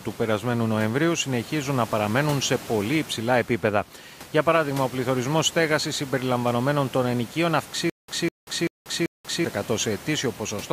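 From 7.90 s to 9.45 s the speech breaks into a stutter with silent gaps. A 201 ms fragment plays, then about 186 ms of dead digital silence, and the cycle repeats four times at a steady 388 ms period. The likely cause is a stalled stream replaying its last buffer on each retry. The gaps drop to true silence, with even the room noise (about 21 dB below the speech) vanishing, which separates this from a simple loop or a decaying echo.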